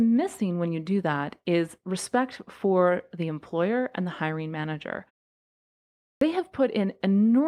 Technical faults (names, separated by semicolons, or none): clipped start after a pause